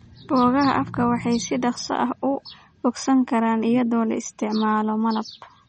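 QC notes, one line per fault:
Throughout, MP3 compression: the speech has a plainly audible watery, swirling quality, and nothing remains above 8.4 kHz, so s sounds lose their sparkle and onsets smear. This is likely low-bitrate MP3 encoding, consistent with roughly 34 kbps. The encoder drops the treble at a fixed cut-off and lets weak frequency lines flicker on and off between frames. A spectrogram shows a hard ceiling at 8.4 kHz and speckled, patchy holes below it. The waveform shows softened attacks.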